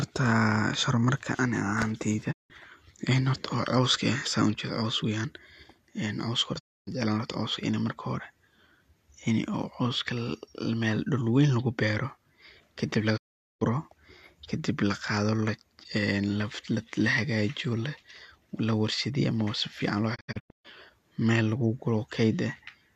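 Digital broadcast dropouts cut the speech four times, each time the receiver muting after losing good frames and fading out over about 20 ms. Holes of 168 ms at 2.31 s, 264 ms at 6.58 s and 432 ms at 13.16 s leave the waveform flat and the spectrogram blank. From 20.14 to 20.66 s the loss is scattered, several short gaps up to 120 ms, before "meel lagu". The sound sent in those gaps is gone.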